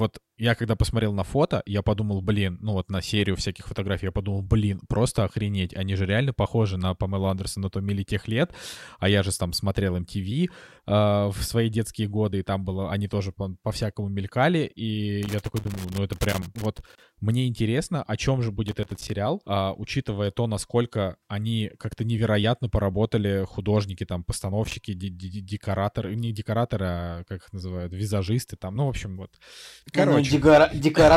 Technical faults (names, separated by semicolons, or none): loose connector crackle